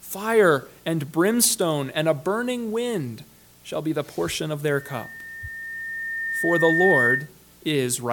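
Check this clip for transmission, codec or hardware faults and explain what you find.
One hardware fault is present: loudspeaker feedback squeal from 4.69 to 7.29 s. A steady 1.8 kHz tone swells over roughly two seconds until it sits about 5 dB above the rest of the sound. The microphone is picking up the loudspeaker it drives, and at 1.8 kHz the loop gain exceeds one, so that frequency keeps amplifying itself. A spectrogram shows a single bright horizontal line at 1.8 kHz that thickens as it grows, and the waveform envelope rises over the first two seconds of that stretch.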